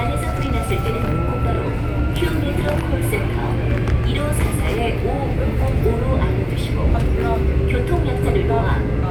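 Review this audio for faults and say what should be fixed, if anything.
Nothing stood out on listening to these sounds, so there is nothing here that needs fixing.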